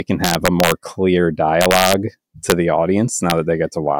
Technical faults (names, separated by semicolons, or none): integer overflow